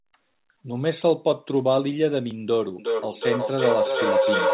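At 2.31 s there is a repeated buffer. New audio was late, so the playback device played its last block a second time. That block lasted about 1.33 ms, which fits a 64-sample buffer. Because the repeated piece is so short, the result is a click or brief buzz at the hard join rather than an audible stutter. The speech continues on time afterwards.

From 2.79 s to the end of the speech, a feedback howl builds. Two devices in the same room are on the call, and sound from one loudspeaker reaches the other's microphone and comes back with more gain on every trip. The repeats grow instead of fading and narrow to a tone around 500 Hz, with the loop's delay roughly 0.4 s. It peaks about 3 dB above the speech, still band-limited to 4 kHz by the call codec.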